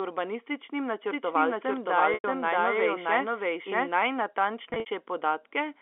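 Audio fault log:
1.03–3.89 s: doubled audio track. A second, equally loud copy of the speech trails roughly 0.7 s behind, clean and dry with no room tail, and it cuts in and out abruptly. This is likely a slower second capture path or an edit holding two copies out of step.
2.14–2.24 s and 4.70–4.86 s: packet loss with pitch repetition. Both spots have about 100 ms of audio missing. At 2.14 s it is one gap that fits five 20 ms packets, long enough for the repeated tone to fade into silence. At 4.70 s the losses are scattered over 160 ms, the longest run lasting 60 ms. The receiver repeats the last pitch period, fades it, then cross-fades back into the speech.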